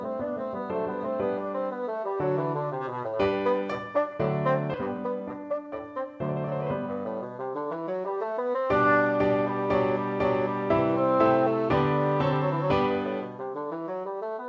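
At 4.74 to 4.76 s there's a skip ahead: roughly 0.4 s of sound just vanishes, and playback lurches forward with no gap where the two sides meet. Right after, from 4.98 to 5.80 s, a jitter buffer speed-up trims short pitch-period chunks, about a tenth of a second in total, so the sound runs at 111% speed, hurried but unchanged in pitch, over the band-limited call audio that stops at 8 kHz.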